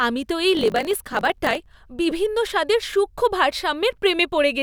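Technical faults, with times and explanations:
0.53–1.68 s, block size mismatch (truncated): block ends are discarded, producing a 46.9 Hz buzz consistent with 1024-sample reads, and speech runs 1.12 times fast with its timbre intact.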